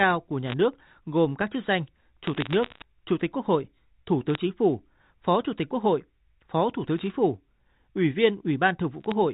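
Speech over a telephone channel, band-limited below 4 kHz in the manner of G.711 mu-law coding, carries bit errors on a digital phone line in five bursts: 0.48–0.54 s just before "nước gồm các chức", 2.24–2.84 s right after "gồm các chức danh", then 4.29–4.35 s, 6.98–7.10 s and 9.01–9.12 s. Each flipped bit corrupts one logarithmic sample, and hits on sign or high-order bits become sharp ticks. At an error rate of a few tenths of a percent they cluster into audible crackle over the speech.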